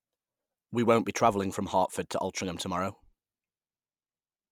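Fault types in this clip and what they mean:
Nothing stood out on listening to this speech recording.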